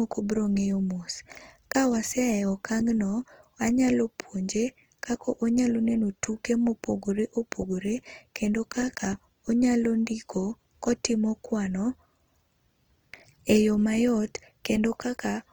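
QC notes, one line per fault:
Throughout, Opus compression: plainly audible grainy, rough speech with noise-filled bands reaching about 20 kHz, likely Opus CELT mode at a rate fitting 24 kbps.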